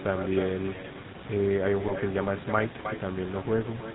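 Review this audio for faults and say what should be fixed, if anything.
Echo with no canceller: the far end's loudspeaker feeds its microphone unchecked, so the whole clip is shadowed by a thinner copy about 10 dB down, roughly a third of a second late. Enabling acoustic echo cancellation at the far end, or using a headset there, would prevent it.

GSM full-rate codec: the vocal-tract model with sparse pulse excitation, consistent with 13 kbps GSM full rate, cuts everything above 4 kHz and leaves a plainly audible buzzy, gravelly roughness throughout. Carrying the call on a wideband codec such as AMR-WB or Opus would prevent it.

GSM bit errors: corrupted decoder parameters around 1.87 to 1.93 s, a 60 ms burst that fits two damaged frames, distort the spectrum and level into a brief squawk and gargle. Stronger channel coding, or muting frames that fail the error check, would prevent it.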